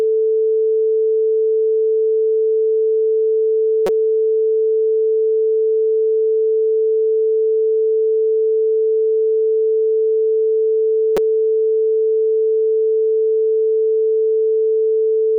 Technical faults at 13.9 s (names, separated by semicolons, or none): none